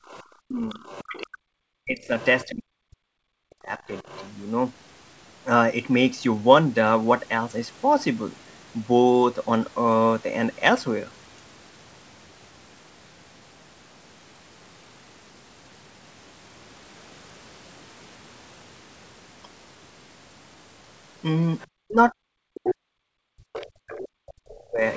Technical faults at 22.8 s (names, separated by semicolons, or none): speech suppressed in double talk; other side's voice leaking through